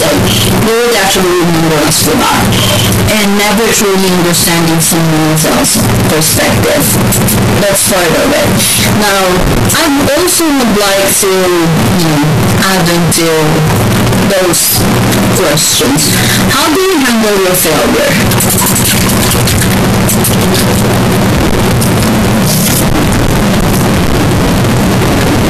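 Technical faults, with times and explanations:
Throughout, float read as integer: the speech sits at a constant, very loud level with a harsh, nearly square waveform, and background noise is as loud as the speech itself. This likely comes from 32-bit float samples being read as 32-bit integers, so each value is set by the sign and exponent bits rather than the true amplitude. Pitch survives because zero crossings stay in place.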